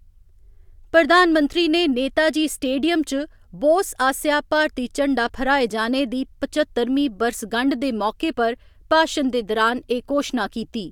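Right around 5.70 s the speech jumps ahead slightly: a few compressed frames got skipped, either missing from the file or rejected by the decoder as corrupt. Only a sliver of audio vanishes, under ten milliseconds.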